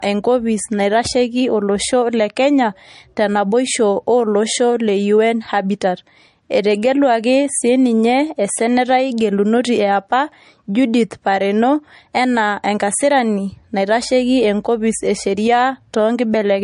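Low-bitrate audio saved at a high bitrate, running throughout the speech: nothing is present above about 10.6 kHz, and the band below carries the swirly, smeared texture of heavy MP3 compression. The cause is likely an earlier low-bitrate MP3 encode, consistent with something near 40 kbit/s, later re-saved as a much larger MP3. That second pass cannot bring back the discarded detail or the missing top octave, so the original damage remains audible.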